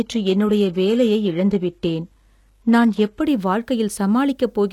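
Adaptive stream starting at a low bitrate runs from 0.00 to 3.23 s of this speech clip. The opening sounds dull and smeared, with nothing above 12.3 kHz and heavier codec artefacts, which fits a player starting on a 16 kbit/s HE-AAC version before switching, with no gap, to roughly 96 kbit/s AAC-LC. Low bit depth without dither is the likely cause of a grainy distortion present throughout, one that follows the sound and coarsens the quieter moments. The rounding error sits only around 50 dB below the signal, pointing to about 10 bits without noise added to break up the steps.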